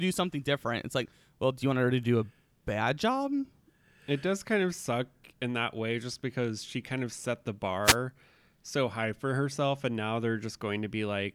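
At 7.84 s, just after "kind of set the", a wireless microphone noise hit lasts about 0.12 s until 7.96 s. The FM radio link fades as reflected signals cancel. Receiver noise rises through the speech. It sounds like a brief swish of static.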